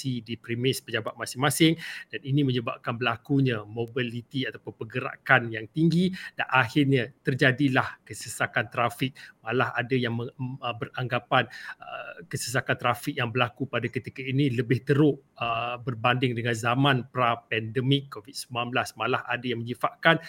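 A single bit flipping in memory or on a digital link throws one sample off by a power of two before it snaps back, producing a bit error spike at 1.08 s and again at 3.88 s. Each is a sharp, broadband tick, peaking at about -28 dBFS, unrelated to the surrounding sound.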